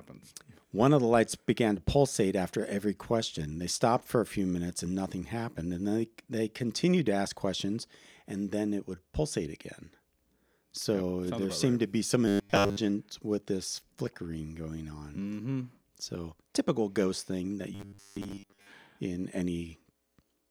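Speech with two robotic stretches, 12.28–12.77 s and 17.75–18.72 s: a stiff 100 Hz buzz, likely from repeated short buffers of about 10 ms standing in for most of the real audio.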